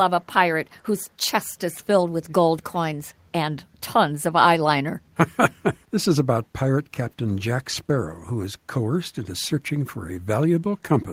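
From 1.05 to 1.09 s, a faint echo leak: a very quiet copy of the speech returns about 349 ms late, a distinct repeat rather than reverb's smear, likely from an echo canceller missing loudspeaker pickup.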